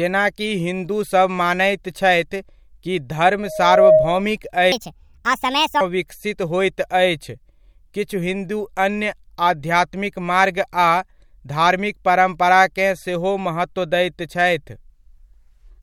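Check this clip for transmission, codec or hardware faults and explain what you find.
Two faults stand out in the speech. From 3.39 to 4.28 s there's loudspeaker feedback squeal: the mic catches its own speaker, and a 627 Hz tone builds over about half a second to roughly 10 dB above the speech. Then from 4.72 to 5.81 s, just before "विकसित होइत", there's a section at the wrong speed. It runs 1.5 times fast, about seven semitones high and rushed, likely from playback against a mismatched clock.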